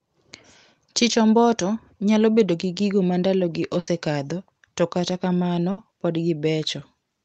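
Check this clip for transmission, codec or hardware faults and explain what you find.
Two short dropouts from a burst of packet loss interrupt the speech; the call path's codec band limit near 8 kHz is not a fault.

Burst of packet loss, at 3.79 to 3.89 s and 5.71 to 5.79 s: consecutive packets failed to arrive, so the receiver extended the last sound for about 80 ms and 60 ms, fading it into a buzz or hiss, then resumed with that stretch missing.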